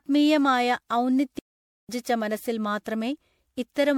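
From the start the speech sounds swirly, smeared and hollow, with blurred attacks: generation loss, likely from several MP3 re-encodes near 96 kbit/s, showing as patchy spectral holes and ragged high-frequency edges. At 1.39 s a playback stall cuts the speech to silence for about 0.5 s, until 1.89 s, likely the player running dry. The waveform shows a flat gap and the spectrogram a blank vertical band.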